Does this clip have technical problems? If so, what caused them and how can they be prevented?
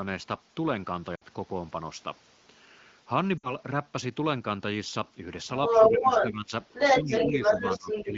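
Yes. Radio errors corrupted AMR-WB frames, which triggered concealment and produced lost AMR speech frames. At 1.16 to 1.23 s and 3.37 to 3.55 s, the sound smears and fades briefly, with about 60 ms lost each time, which fits three 20 ms frames. Stronger channel coding or better radio coverage would prevent these dropouts.

The echo canceller likely left residual loudspeaker pickup, so the other side's voice is leaking through. It sits clearly below the main voice from 5.47 to 6.32 s and only slightly below it from 6.70 to 8.04 s. Better acoustic echo cancellation and lower loudspeaker volume would prevent it.

During overlapping talk, the canceller likely attenuated both signals, causing speech suppressed in double talk. The voice dips a few decibels at 5.78 to 6.07 s, then by about 10 dB at 6.26 to 6.52 s and from 7.02 s to the end. It sounds dulled and patchy over the 15.85 kbit/s wideband coding. 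A canceller with reliable double-talk detection would prevent this.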